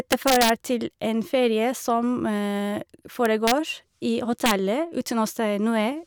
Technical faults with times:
0.12-0.50 integer overflow
3.26-3.51 integer overflow
4.46-4.51 integer overflow

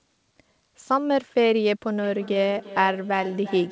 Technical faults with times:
2.03-3.72 feedback echo between two devices

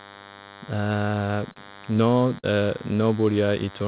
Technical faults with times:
0.00-3.88 DECT cordless phone buzz
1.52-1.58 short concealed packet loss
2.39-2.46 short concealed packet loss

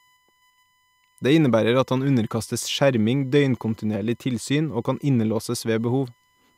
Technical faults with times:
0.00-6.58 USB whine

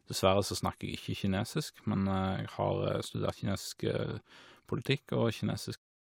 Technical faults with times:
none

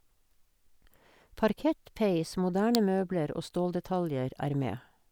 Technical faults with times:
2.75 electrical switching spike

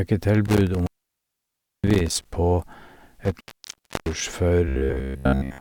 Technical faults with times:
0.45-2.25 intermittent contact
3.25-4.22 intermittent contact
4.68-5.60 robotic sound from repeated short buffers

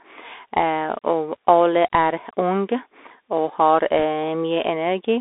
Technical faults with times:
0.00-5.20 Bluetooth CVSD headset codec
3.99-4.03 bit errors on a Bluetooth voice link

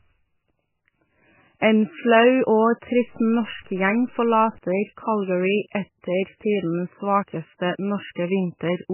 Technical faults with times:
0.00-8.93 MP3 compression
2.97-4.58 low bit depth without dither

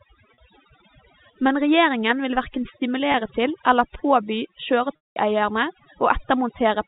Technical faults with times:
0.00-6.87 overdone noise removal
0.34-0.38 packet loss with pitch repetition
3.12-3.14 packet loss with pitch repetition
4.96-5.16 packet loss with pitch repetition

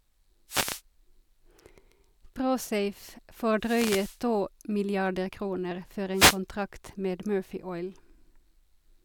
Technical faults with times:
0.48-0.81 wireless microphone noise hit
3.59-4.20 wireless microphone noise hit
6.14-6.38 wireless microphone noise hit

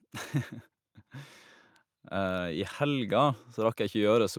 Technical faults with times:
2.09-4.38 automatic gain rising

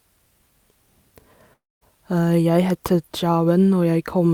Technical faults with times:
1.53-1.83 long network dropout

